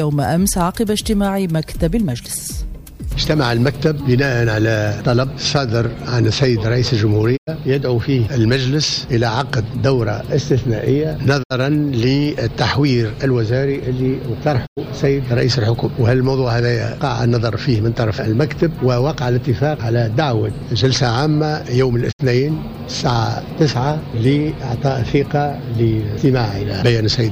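Digital broadcast dropout at 7.36–7.49 s, 11.42–11.52 s, 14.65–14.79 s and 22.11–22.21 s: the receiver mutes with a 20 ms fade wherever frames go bad, leaving silent holes of 96 or 64 ms, consistent with two or three lost 32 ms frames, before sound resumes.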